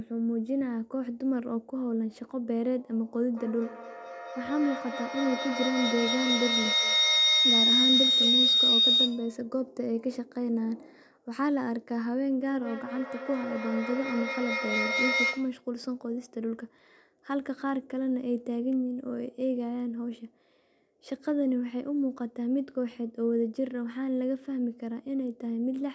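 Feedback howl builds from 3.29 to 9.44 s near 4 kHz, peaking about 5 dB above the speech, then again from 12.49 to 15.65 s near 2 kHz at about 1 dB. The microphone-to-loudspeaker loop gains level each pass, repeating roughly every fifth of a second and narrowing to a tone.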